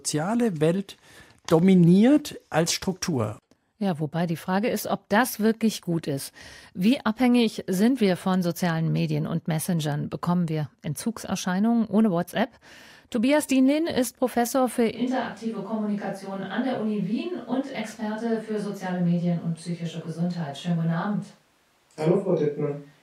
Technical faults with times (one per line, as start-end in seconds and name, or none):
14.96-23.02 switch to a distant microphone